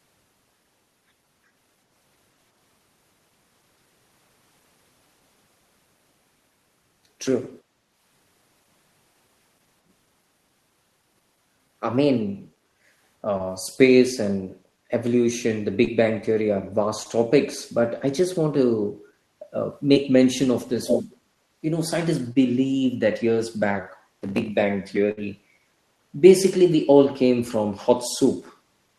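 From 12.67 s the background keeps getting gated by the echo canceller, dipping about 6 to 7 dB for 0.15 to 0.4 s at 12.67, 14.69, 19.04, 21.20 and 24.06 s, then briefly (about 5 dB) at 25.49 s. The canceller clamps the mic while the far end plays, so the room tone ducks and comes back.

Interleaved with those are short concealed packet losses at 13.37, 15.84, 17.03, 19.93 and 22.33 s. Each time about 20 ms never arrived and the decoder patched it by stretching the preceding sound, so you get a tiny smear or wobble.

At 20.84 to 21.16 s there's a delayed copy of the speech trailing by about 391 ms, about as loud as the original. That's likely an echo leak, with the far end's loudspeaker getting past its canceller and being sent back.

Near the end, 25.11 to 25.19 s is a burst of packet loss: about 60 ms went missing in a row, filled by extending and fading the last sound into a short held buzz or hiss before the speech jumps ahead.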